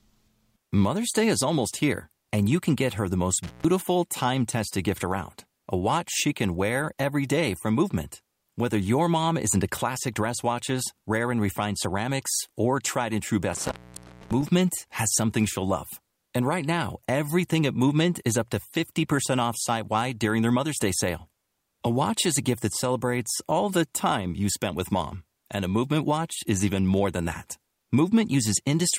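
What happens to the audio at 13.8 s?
An intermittent contact cuts the speech from 13.53 to 14.49 s, the line opening for about 0.61 s; crackle at the edges and faint hiss mark a loose connection, not a digital dropout.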